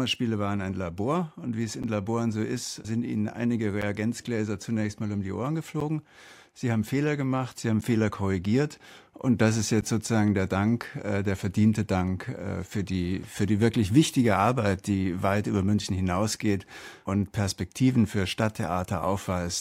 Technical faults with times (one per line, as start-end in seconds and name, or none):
1.83-9.82 periodic USB or driver dropouts